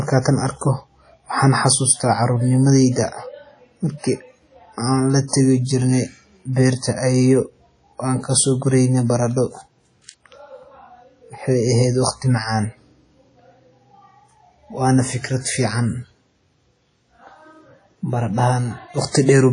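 Throughout the speech, ringing, washy artefacts and a breathing hiss suggest likely WMA compression, consistent with roughly 32 kbps; the spectrogram shows nothing above 10.1 kHz. At 5.28 to 5.33 s, pre-echo puts a 56 ms smear of hiss before an attack, visible as faint noise ahead of the waveform's sharp onset.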